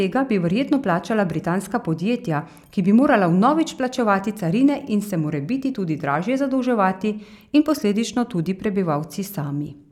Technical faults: none

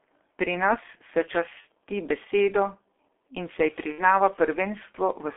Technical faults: G.723.1 codec; VoIP packet loss concealed by the speech codec

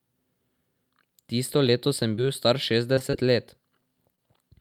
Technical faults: short concealed packet loss; short stall from a late packet

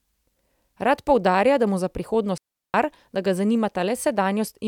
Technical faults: digital wireless dropout

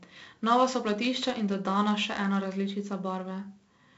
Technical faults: 4-bit ADPCM compression

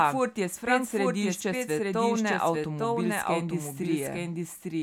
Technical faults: doubled audio track

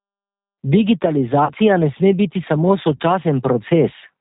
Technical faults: G.729 codec; VoIP packet loss concealed by the speech codec

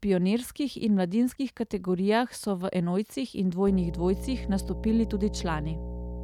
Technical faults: mains hum

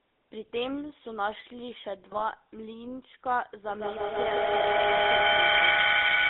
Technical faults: GSM full-rate codec; GSM bit errors; feedback howl

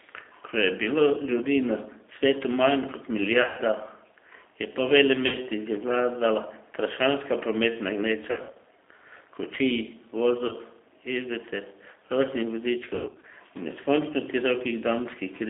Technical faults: G.729 codec; VoIP packet loss concealed by the speech codec

